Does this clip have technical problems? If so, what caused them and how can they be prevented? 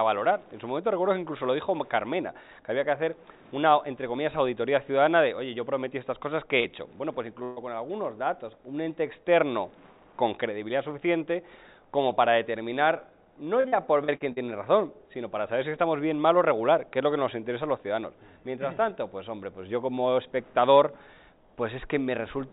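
Yes. The audio comes through a call path with nothing above 4 kHz, which fits a narrowband G.711 A-law link, and three packet-loss faults can be heard in it.

Short concealed packet loss at 6.60 to 6.67 s: about 40 ms of audio never arrived, and the receiver patched the hole by extending the preceding sound for roughly the same length before blending back in. It is heard as a brief smear or wobble. On a spectrogram the harmonics or noise texture just before 6.60 s repeat unnaturally smoothly for a narrow strip. In the waveform the cycles there look copied rather than evolving. A larger jitter buffer or forward error correction on the sending side would let such a short loss be recovered instead of guessed.

Burst of packet loss at 7.44 to 7.59 s: about 120 ms went missing in a row. The decoder filled roughly 125 ms by continuing the last sound and turning it down, so the gap holds a buzz or hiss that sinks rather than going silent. 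The audio then resumes further along, with that stretch skipped. A spectrogram shows a static, fading band with no new detail. The waveform shows a shrinking envelope that ends in an abrupt resumption. Redundant packets or a more stable network route would keep several consecutive packets from being lost together.

Repeated packet loss (robotic sound) at 13.60 to 14.39 s: five separate gaps, the longest about 42 ms, add up to roughly 200 ms patched out of that 0.8 s span, about a quarter of it. Each patch continues the last sound just before the next one starts, so the passage turns choppy, with pieces missing. On a spectrogram there are five short smeared columns where the texture freezes. The waveform shows repeatedly interrupted, repetitive segments. Fixing the network problem behind the sustained loss, together with adaptive FEC, would prevent this kind of stretch.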